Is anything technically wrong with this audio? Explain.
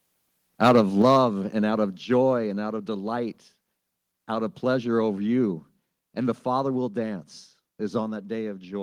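Yes. From 0.62 to 1.2 s, just before "and out of", the loudest peaks sound harsh and crackly: microphone overload, likely from input gain driving peaks about 6 dB past the converter's limit, flattening a few percent of samples.

At 1.02 s and again at 2.04 s, between "and out of" and "and out of delight", the whole level drops suddenly by about 4 dB, then about 3 dB. This is the microphone volume stepped down, likely software reducing input gain after detecting the overload.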